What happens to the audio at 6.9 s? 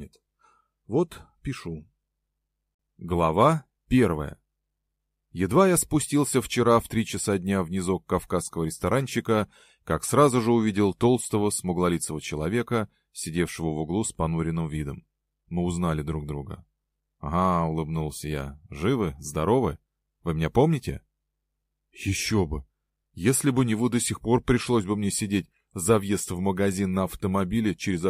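Nothing goes wrong at 6.9 s; the audio plays through that moment without any dropout, glitch or other fault.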